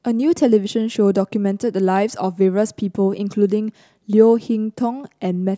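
Nothing audible goes wrong at any point in the recording.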